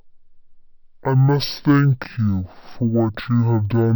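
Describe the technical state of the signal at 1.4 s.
At 1.4 s the speech is affected by stereo read as mono, a fault present across the whole clip. Left and right samples, interleaved in the file, are being played back in sequence as a single channel, so everything runs at 0.5x speed and sits 12 semitones, an octave, low. What separates it from a plain sample-rate mismatch is the fainter mirrored copy of the sound folded into the upper half of the spectrum.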